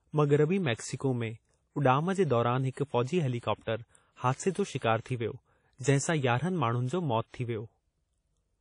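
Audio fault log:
Throughout: WMA compression. The speech carries plainly audible codec damage, likely from a WMA encode at a low rate, which fits about 32 kbps. Nothing is heard above 10.1 kHz, so the top band is simply gone. The codec works on long transform blocks. Its quantisation noise smears across tens of milliseconds around each sound. That gives a ringing, washy quality. A hiss rises and falls with the speech.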